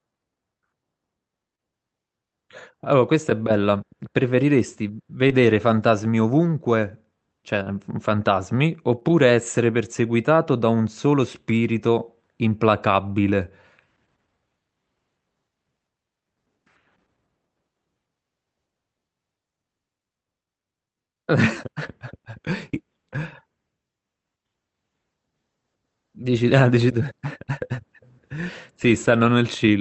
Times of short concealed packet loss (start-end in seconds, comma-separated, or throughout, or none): 1.55-1.60, 5.28-5.32, 7.64-7.71, 8.99-9.03